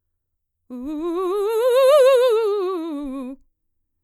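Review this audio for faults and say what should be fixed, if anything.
Nothing here needs fixing; the music comes through without any problems I can hear, so you can leave it as it is.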